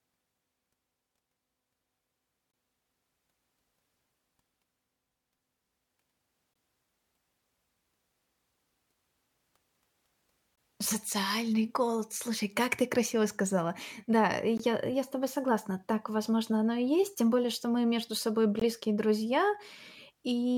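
Gap between chunks, at 2.52–2.54 s, 6.54–6.56 s, 10.56–10.58 s, 14.58–14.60 s and 18.60–18.62 s. The speech arrives in 4 s chunks, and each join leaves a 20 ms stretch of silence instead of running straight on. No sound is lost; the flow is simply interrupted at each boundary. Each one is heard as a brief hole, recurring on a steady 4 s rhythm through the clip.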